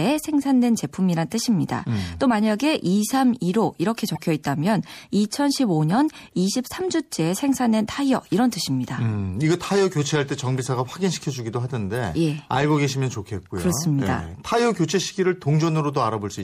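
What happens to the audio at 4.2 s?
From 4.15 to 4.20 s a corrupt frame was decoded. Garbled data in a couple of frames put energy at the wrong frequencies, heard as a brief chirp or noise burst peaking around -20 dBFS, shown as a short, sharp-edged broadband smear on a spectrogram. Across this moment the sound is also watery and swirly, likely from MP3 compression at a rate that fits about 64 kbps, with flickering gaps.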